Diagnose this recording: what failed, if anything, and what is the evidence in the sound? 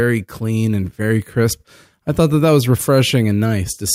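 Nothing failed; the speech shows no audible fault at any stage.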